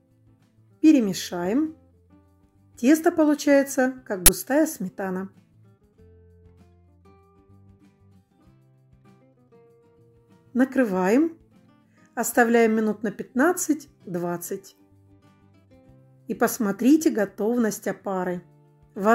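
At 4.26 s an uninitialised buffer plays out, lasting until 4.28 s. The burst is harsh, loud digital noise. It lasts about 23 ms, which fits a 1024-sample buffer. Here the player sent a block to the output before any audio had been written into it. Whatever old data sat in that memory was read as samples. The result is a sharp, loud crackle, then normal playback resumes.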